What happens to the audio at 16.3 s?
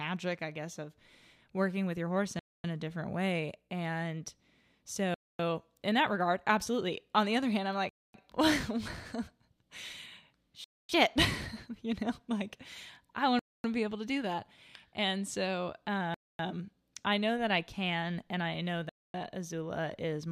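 A gap between chunks interrupts the speech from 16.14 to 16.39 s: a 250 ms stretch of silence inserted at a join between 2.5 s chunks. No sound is lost, but playback stops and resumes, leaving a short hole.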